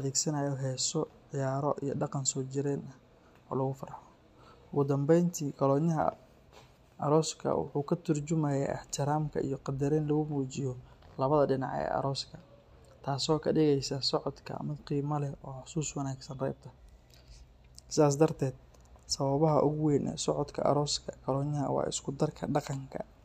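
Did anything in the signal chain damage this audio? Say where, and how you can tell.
No, nothing in the signal chain audibly damaged this speech recording. At no point in the clip does any stage of the chain leave a mark that a listener can hear.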